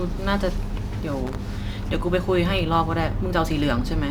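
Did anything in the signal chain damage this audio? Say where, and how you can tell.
Yes: loose connector crackle in the analogue wiring, 1.27 to 1.35 s, a short irregular scratchy burst from a contact making and breaking. Unlike digital dropouts, it leaves no clean, evenly timed gaps.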